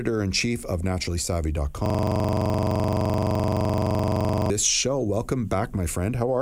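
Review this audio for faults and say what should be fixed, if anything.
System hang loop, from 1.86 s to 4.50 s. For about 2.6 seconds, a single 42.67 ms slice of the speech repeats exactly, some sixty times, producing a rapid mechanical rattle at about 23.4 Hz. The host or audio driver stalled while the playback hardware kept reading the same ring buffer, whose length fits a 2048-sample buffer. The looped section should be cut or re-recorded. To prevent it, keep the audio thread from being blocked, give it higher priority, and use a watchdog that mutes output when the buffer stops being refilled.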